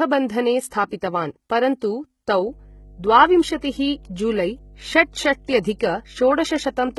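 Speech, carrying heavy codec damage from start to finish: the treble is present but sounds synthetic, with s sounds turning gritty, metallic and lispy, and upper harmonics failing to line up with the lower ones. That points to likely HE-AAC compression at a low bitrate, around 16 kbps, where spectral band replication copies lower bands upward and shapes them with a coarse envelope. What separates it from plain AAC at the same bitrate is that plain AAC would simply cut the treble off, leaving it dull rather than false. From 2.47 s to the end, mains hum adds a steady 50 Hz tone about 25 dB below the speech, the power line leaking in through a ground loop or a nearby transformer. Unlike rumble or wind noise, it holds one fixed pitch and level, and it keeps sounding in the pauses between phrases.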